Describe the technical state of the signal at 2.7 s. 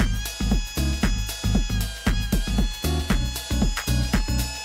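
At 2.7 s the signal is intact, with no audible technical fault at that point.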